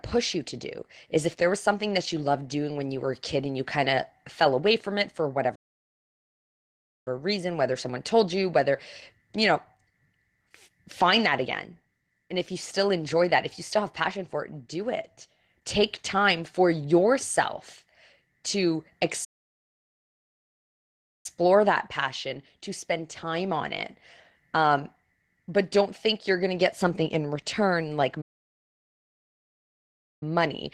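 Opus voice compression runs throughout. The speech sounds muffled, hoarse and slightly robotic, which fits hybrid coding at about 16 kbps. Playback stalls follow, with silence from 5.55 to 7.08 s after "away from it for", from 19.24 to 21.26 s before "that passion to spend", and from 28.21 to 30.23 s after "something in return like". The player likely ran short of data each time.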